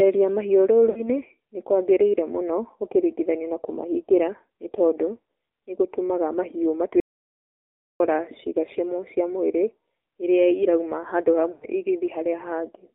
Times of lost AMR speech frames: 0.90-1.09, 11.52-11.68

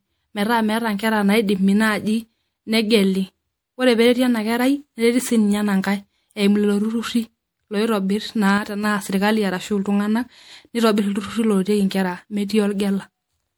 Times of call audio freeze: none

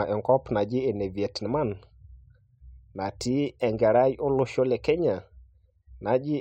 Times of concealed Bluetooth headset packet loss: none

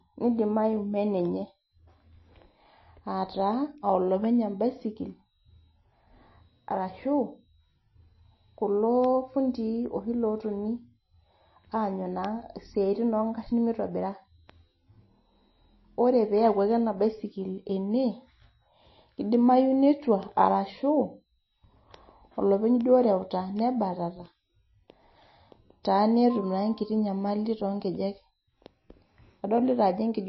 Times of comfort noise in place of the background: none

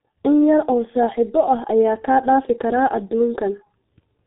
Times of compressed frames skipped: none

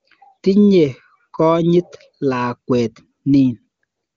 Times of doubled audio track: none

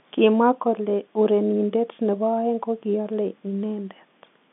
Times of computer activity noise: none

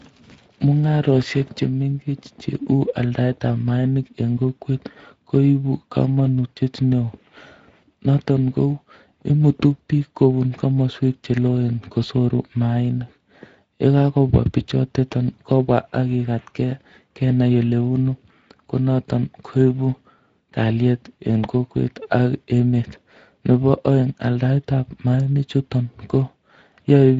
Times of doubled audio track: none

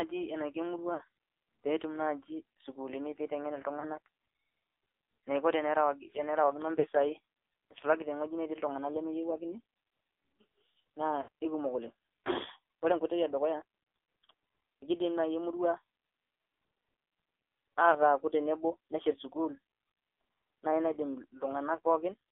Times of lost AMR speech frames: 0.94-1.01, 3.80-3.85, 6.80-6.87, 11.22-11.28, 17.92-17.96

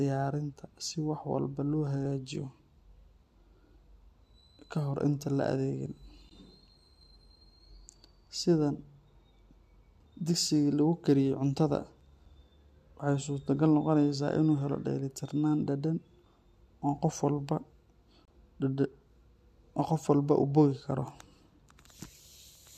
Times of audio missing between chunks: 2.05, 7.03, 12.01, 16.98, 21.96

